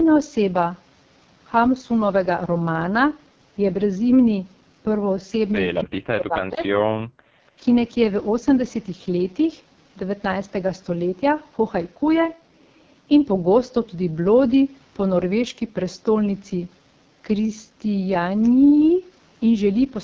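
Throughout the 20-second recording, the speech carries the sound of the AMR wideband (HD Voice) codec at heavy damage. Nothing is present above 7.2 kHz. The voice has the rough, raspy, buzzy texture of the codec's pulse-excited vocal tract model running with too few bits, which fits AMR-WB's lowest 6.6 kbit/s mode. At that rate the excitation is coarse, so voiced sounds lose smoothness, and the top band is filled with shaped noise instead of real detail.

From 5.85 to 6.77 s the talker's level falls away in pieces, most likely speech suppressed in double talk. Both sides were active at once, and the echo canceller treated the near talker as possible loudspeaker echo and attenuated the microphone path. The deepest cuts reach around 40 dB. Roughly 0.7 s of the span is affected, so the voice breaks up and partly vanishes rather than simply getting quieter.

From 7.06 to 7.53 s the background is gated by the echo canceller. 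While far-end audio played through the loudspeaker, the canceller clamped down on the microphone. The room sound drops by about 39 dB for around 0.4 s in total, leaving a brief near-silent hole before the ambience comes back when the suppression releases.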